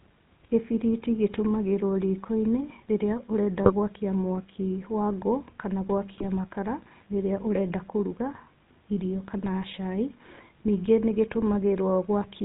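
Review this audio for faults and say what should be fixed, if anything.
The whole speech clip passes through the GSM full-rate codec. Nothing survives above 4 kHz, and the voice turns buzzy and gravelly, which fits a 13 kbps GSM path. To prevent this, record or route the audio over a wideband path instead.

GSM bit errors strike at 3.63–3.72 s, after "rĩrĩa ũrenda", and at 6.18–6.25 s, after "mwaki wa ngũ kana". Corrupted decoder values warp the sound into brief squawks and gargles. To prevent this, use a stronger radio link or add error protection before decoding.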